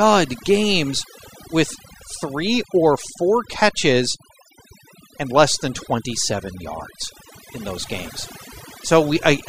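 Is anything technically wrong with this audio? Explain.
Yes. Throughout the speech there is overdone noise removal: bands sitting near the estimated noise level are pushed nearly to silence, leaving twinkling specks in a dead background. Unlike a noise gate, this works band by band.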